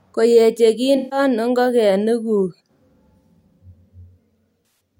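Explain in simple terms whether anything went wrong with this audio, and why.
AAC frame loss with concealment hits the speech at 0.96–1.19 s and 4.59–4.80 s. Audio data went missing, about 0.15 s and 0.17 s of it, and the decoder patched the gaps by reusing the last good sound, leaving brief smeared, noisy stretches. The second gap comes in scattered bits, the longest about a tenth of a second.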